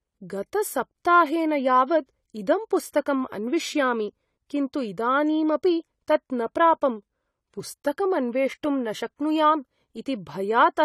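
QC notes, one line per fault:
Throughout: AAC compression, speech dull and smeared with fizzy sibilants; spectrogram shows a hard cut-off at 14.1 kHz, likely from AAC-LC near 32 kbps.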